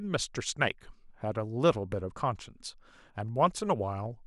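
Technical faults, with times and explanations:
No technical faults are audible in this speech recording.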